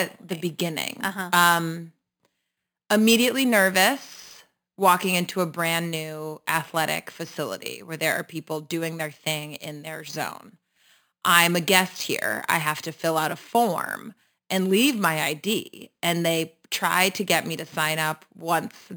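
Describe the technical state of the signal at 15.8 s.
At 15.8 s you're hearing the imaging from sample-and-hold upsampling that runs through the whole clip. It sounds like the speech was brought up from roughly an 11 kHz rate by just repeating samples, with no smoothing filter. That leaves a mirrored copy of the spectrum sitting between about 5.5 and 11 kHz, only about 12 dB below the speech. You hear it as a bright, metallic fizz that rises and falls with the speech and tracks opposite to its pitch.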